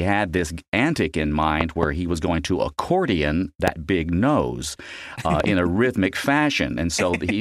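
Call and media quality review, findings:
Loud pop, 1.61–1.85 s, after "this antic in": double pop, roughly 20 dB over speech, which continues beneath. Likely a voltage transient (connector, switch or static) passed through downstream filtering. Loud pop, 3.68–3.70 s, after "was going to accordion": single sharp pop, similar level, likely a driver glitch injecting a step. Loud pop, 5.40–5.46 s, after "big nose uh": two quick pops, somewhat lower, likely a repeated contact transient.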